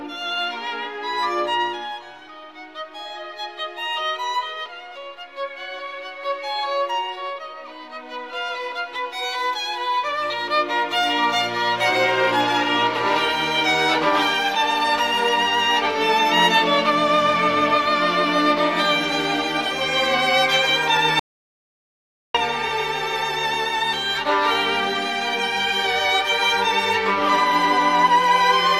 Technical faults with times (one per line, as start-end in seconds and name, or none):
21.19-22.35 audio dropout to silence